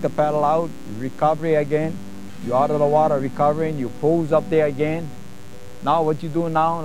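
From start to finish a mains buzz sits under the sound, a steady raspy drone roughly 25 dB below it. Switching spikes at twice the 60 Hz supply rate leak in, drawing evenly spaced horizontal lines at 60 Hz harmonics into the kHz range on a spectrogram, and sharp ticks 120 times a second on the waveform.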